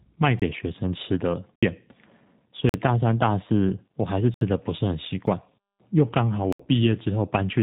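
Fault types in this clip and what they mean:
G.729 codec, throughout: the speech is rebuilt at 8 kbit/s from a vocal tract filter, a pitch predictor and a few pulses per frame. Nothing above 3.8 kHz survives, and the plainly audible damage gives the voice a rough, synthetic quality.
Block of digital silence, at 0.40, 1.56, 2.69, 4.34, 5.27 and 6.53 s: the sound cuts out and back without a fade. The holes last 23, 70, 46, 70, 7 and 70 ms, and the shortest gap sounds like a tick. The 23 ms hole fits a 1024-sample buffer left unfilled.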